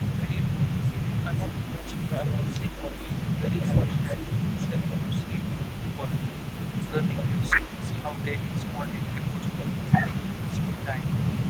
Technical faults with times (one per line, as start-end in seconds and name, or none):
0.00-11.50 echo leak
0.18-1.84 speech suppressed in double talk
2.37-2.99 speech suppressed in double talk
3.63 audio missing between chunks
4.06-4.12 speech suppressed in double talk
5.97-6.11 speech suppressed in double talk
6.88-10.95 speech suppressed in double talk
7.59 audio missing between chunks